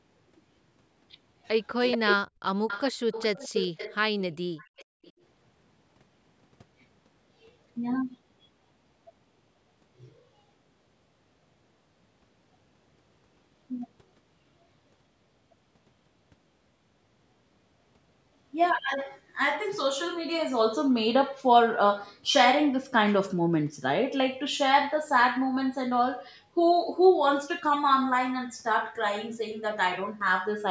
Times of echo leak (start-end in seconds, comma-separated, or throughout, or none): 1.91-1.98, 2.68-3.96, 4.57-5.12